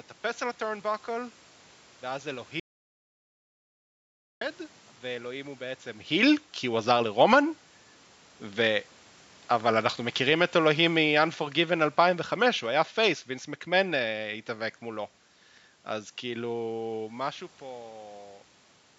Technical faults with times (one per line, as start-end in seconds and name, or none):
2.60-4.41 audio dropout to silence
9.66-14.17 automatic gain falling